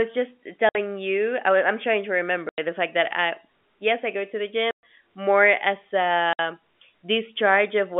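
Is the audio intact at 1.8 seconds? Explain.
Yes, the audio is intact at 1.8 seconds: the speech there comes through cleanly within the narrow telephone band of the G.711 line, with nothing breaking or disturbing it at that point.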